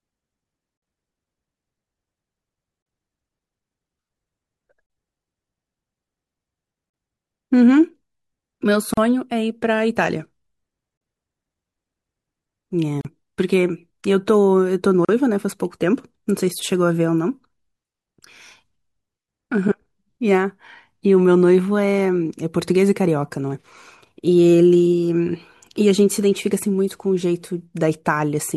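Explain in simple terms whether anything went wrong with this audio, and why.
The speech was encoded in separate pieces about two seconds long and then joined without trimming the silence each encoding run adds at its start and end. The result is a gap at a join of encoded pieces: a brief dropout, about 49 ms at 0.77 s and about 38 ms at 2.82, 4.86, 6.90, 8.94, 10.97, 13.01 and 15.05 s. Each time the sound cuts out briefly, then picks up where it stopped.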